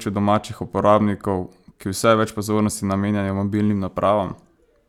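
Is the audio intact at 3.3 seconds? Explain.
Yes, at 3.3 seconds the speech runs cleanly, with no fault audible at that moment.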